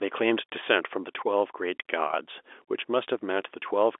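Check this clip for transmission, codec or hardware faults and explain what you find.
No faults found.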